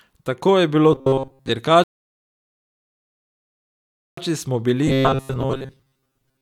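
At 0.93 s, right after "je bilo", the speech turns into a rigid, metallic buzz pitched at 134 Hz that only loosely tracks the words, lasting until 1.50 s. This is robotic sound from repeated short buffers. Audio likely arrived too slowly, so the player kept looping a fragment of about 7.5 ms, which sets that fixed pitch. Most of the real audio in that stretch is skipped rather than heard.

From 1.84 s to 4.17 s the sound drops to silence, then picks up exactly where it stopped. This is a rebuffering stall: the player ran out of downloaded audio and waited for more. Nothing is lost, but about 2.34 s of dead air is added.

At 4.88 s the same 134 Hz metallic buzz returns and runs to the end at 6.42 s. It is again robotic sound from repeated short buffers, likely caused by delayed delivery that forced the player to repeat a 7.5 ms fragment while skipping most of the incoming audio.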